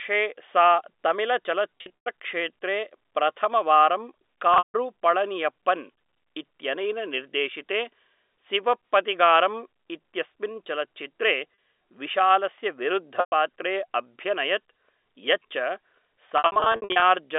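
Packets went missing in roughly 20 ms chunks, and the receiver filled each gap by repeating the last pitch period: at 1.78 s, at 4.54 s just before "पळनियप्पन् इत्यनेन", at 11.54 s after "सिवप्पगथिगारम् इत्यस्मिन् चलच्चित्रे", at 13.2 s, and scattered across 16.38 to 17.02 s. This packet loss with pitch repetition sounds like brief buzzy holds. The 160 ms run near 4.6 s fades toward silence.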